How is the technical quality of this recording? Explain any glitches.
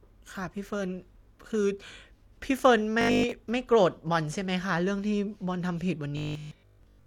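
The speech turns into a rigid, metallic 50 Hz buzz from 3.01 to 3.31 s and again from 6.17 to 7.05 s, robotic sound from repeated short buffers. The likely cause is a 20 ms block being looped while most of the real audio is skipped.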